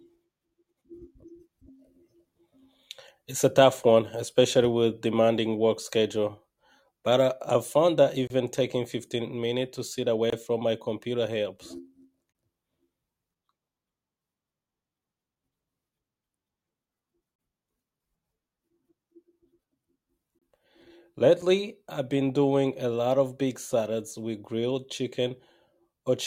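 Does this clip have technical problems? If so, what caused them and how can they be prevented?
Yes, there's a gap between stream segments, six times: 8.27 s right after "I I've found that", 10.30 s between "minutes to sit" and "from my", then 12.33, 17.36, 20.39 and 21.42 s just before "I've been doing a". Each is a hard-edged hole of silence, about 24 to 29 ms, with the last one only about 5 ms. They sit on one-second boundaries, so the segment timestamps don't quite butt up and the player pads the gap with silence. Nothing's actually lost. To prevent it, make the packager write contiguous timestamps so each segment starts exactly where the previous one ends.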